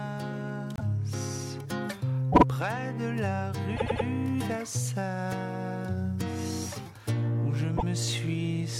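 Repeated frames at 0.76 to 0.83 s, 2.32 to 2.43 s, 3.76 to 4.05 s and 7.77 to 7.84 s: short runs of compressed frames were played again, so the sound stutters. The blocks are 72, 48, 96 and 72 ms, the second repeating twice and the third three times. The clip runs about half a second longer in total.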